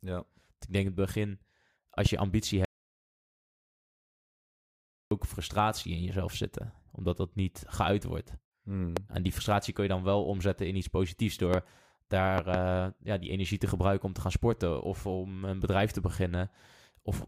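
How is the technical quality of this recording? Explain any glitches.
The speech recording has two kinds of glitches: repeated loud pops and one long dropout to silence.

Loud pops occur at 2.06 s, 8.97 s, 11.54 s after "omzetten in iets positiefs", and as two quick pops between 12.38 and 12.57 s before "ja die energie te". A sudden voltage spike, likely from static or a connector, sits on top of the continuing speech, peaking roughly 15 to 20 dB above it.

An audio dropout to silence runs from 2.65 to 5.11 s, cutting in after "je ambitie" and returning at "frustratie in jezelf zitten". The input was lost for about 2.5 s, likely through a failed connection, and only silence was written, so the gap is dead silence with no room tone.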